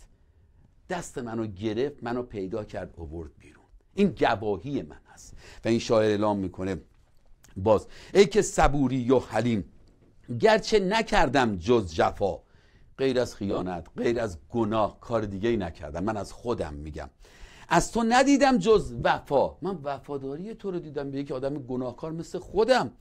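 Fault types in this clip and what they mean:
lost LE Audio frames: LC3 frames went missing and the decoder refilled them from the last spectrum with randomised signs, heard as short noisy smears at 7.05 s, 13.51–13.62 s and 18.99–19.03 s. Spectrograms show blurred vertical patches without fine structure; waveforms turn briefly noise-like.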